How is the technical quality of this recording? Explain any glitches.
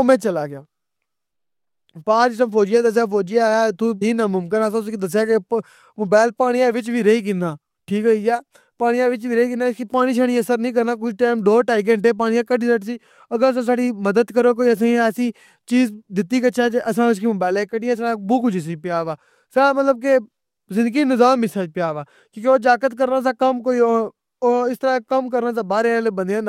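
The recording has one glitch, a sudden skip forward in the speech.

Stream segment skipped, at 4.01 s: right after "دسیا فوجی اخیا اتھوں", the audio jumps abruptly to "ناممکن آ اساں اُسکی", with a tiny blip at the join. The likely cause is a segmented stream in which one chunk failed to arrive and the player moved straight on to the next, so a stretch of the talk is simply absent and the sentence lurches ahead mid-flow.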